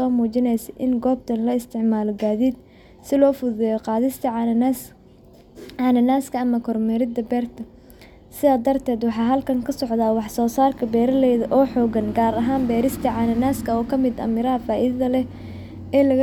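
No technical faults can be heard anywhere in the recording.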